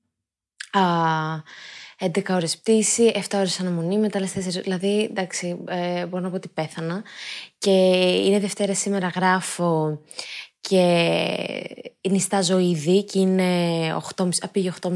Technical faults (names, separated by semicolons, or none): none